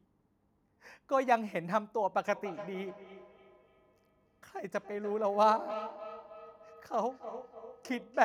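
From 2.35 s to the end, the speech returns as a hollow, ringing repeat roughly every 300 ms, at most about 14 dB below the direct sound. This is feedback echo between two devices: one device's microphone re-captures the other's playback, which its own echo canceller cannot remove.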